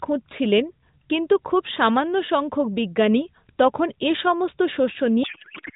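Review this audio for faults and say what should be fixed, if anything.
From 5.24 s to the end at 5.76 s, a codec payload misread turns the narrowband AMR speech into garbled, warbling noise that barely tracks it. Octet-aligned AMR is being read as bandwidth-efficient, so the decoder pulls fields from the wrong bit positions. Unlike packet loss, it is continuous garbage rather than gaps or smoothed-over dropouts. To prevent it, make both ends negotiate and use the same AMR payload format, octet-aligned or bandwidth-efficient.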